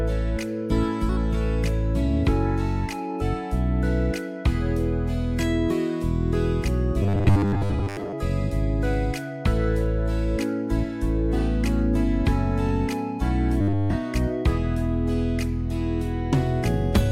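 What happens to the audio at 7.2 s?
At 7.2 s the audio has turned into robotic sound from repeated short buffers, lasting from 7.03 to 8.13 s. A rigid metallic buzz at 100 Hz replaces the normal tone. This likely comes from a 10 ms chunk being replayed while most of the real audio is skipped.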